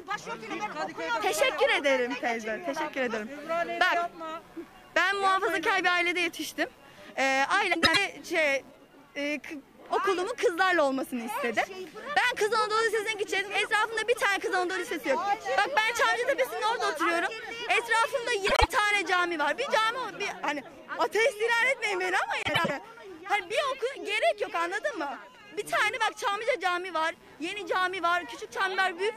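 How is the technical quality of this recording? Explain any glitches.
The recording has two problems: a constant interference buzz and three short scrambled passages.

Computer activity noise runs through the whole clip, pulsing at roughly 150 Hz and sitting about 35 dB below the signal. Processor, graphics or mouse load disturbs the ground shared with the audio circuit, so the buzz follows the computer's activity rather than the sound.

Frames out of order occur at 7.73–7.97 s, 18.46–18.68 s and 22.43–22.71 s. In each, two adjacent runs of frames were decoded in swapped order, with blocks of 104.5 ms, 78.4 ms and 104.5 ms respectively. The exchanged halves produce a garbled flutter, without losing any time.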